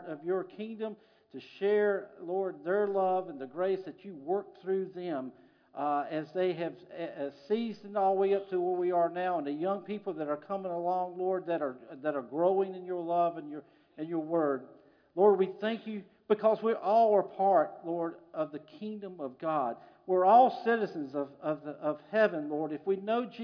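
No technical faults are audible anywhere in the recording.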